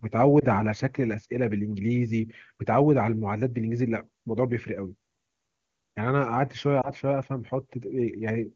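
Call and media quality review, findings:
Brief dips or warbles at 0.39 s and 6.81 s, lost AMR speech frames. One 20 ms frame per event failed its check. The decoder filled in by repeating the last good pitch and vocal-tract settings at reduced gain. Wideband decoding sounds clean, consistent with a high AMR-WB rate.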